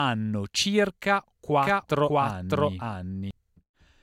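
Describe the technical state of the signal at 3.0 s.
At 3.0 s the speech carries a doubled audio track, running from 1.63 s to 3.31 s: a second full-band copy trails the original by roughly 0.7 s at about equal loudness, likely from a slower capture path. It sounds like overlapping, out-of-step speech, and a spectrogram shows the same formant patterns repeated, shifted, without decay.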